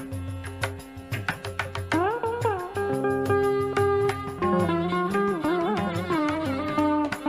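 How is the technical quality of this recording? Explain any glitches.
Nothing stood out as a technical problem on listening to this recording.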